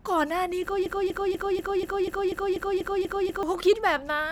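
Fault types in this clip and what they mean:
Broken-record loop: a 0.24 s slice of speech repeats identically eleven times, 0.86 to 3.43 s, likely a stalled stream; unlike echo, no fresh speech continues underneath.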